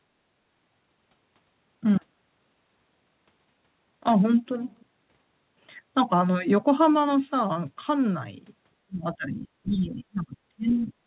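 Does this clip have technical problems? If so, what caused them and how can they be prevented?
Yes. Between 8.85 and 10.92 s the speech repeatedly dips by up to about 25 dB, roughly one and a half seconds in total. This is likely speech suppressed in double talk: the echo canceller treated the talker as loudspeaker echo while both sides spoke. A headset, or gentler double-talk suppression in the canceller, would prevent it.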